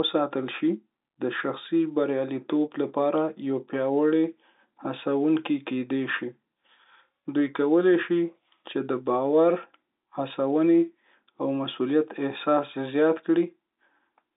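No technical faults occur at any point in the speech, which carries the narrow band of a G.711 telephone line with nothing above about 3.8 kHz.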